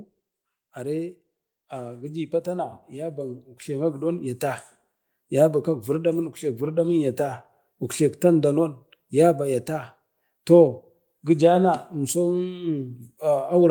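Automatic gain rising runs from 0.74 to 4.48 s in this speech recording: the gain control judged the input too quiet and stepped its gain up by about 12 dB across those few seconds, so the voice and the background noise swell together.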